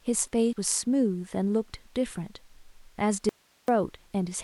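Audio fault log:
0.49–0.53 s, damaged data in a compressed stream: a brief blip cuts through the speech for about 46 ms. The compressed data covering this moment was corrupted, so the decoder could not read those frames properly. It produced garbage output for that stretch, lost its place in the stream, and had to hunt for the next valid frame header before normal decoding resumed. That is why the disturbance is so short and sharp rather than a smooth gap.
3.29–3.68 s, audio dropout to a faint residue: the speech cuts out abruptly for about 390 ms and then returns just as suddenly. During the gap only hiss remains, roughly 40 dB below the speech level. The hard edges and the steady noise floor show that the wanted signal was lost while the downstream path stayed live and kept passing its own noise. The likely cause is a momentary break in the feed ahead of that live stage.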